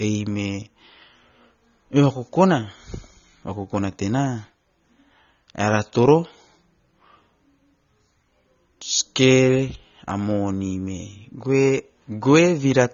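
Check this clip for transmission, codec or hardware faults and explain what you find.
There's one fault, and it runs the whole way through: likely AAC compression. The speech is dull, with nothing above 6.9 kHz, and sibilants and held sounds warble and fizz, which fits a low-bitrate stream of roughly 24 kbps.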